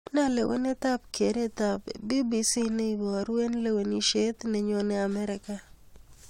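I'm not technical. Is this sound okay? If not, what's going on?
Yes, nothing stood out as a problem when listening to this recording.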